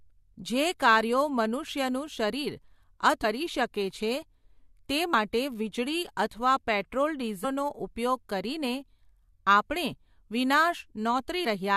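Damaged data in a compressed stream breaks the audio twice. Corrupt bytes make the decoder misread frames, lose sync and hunt for the next frame header, producing a brief break at 3.23 s, just before "શકે છે", and again at 5.13 s, before "વીજળી અથવા પેટ્રોલ".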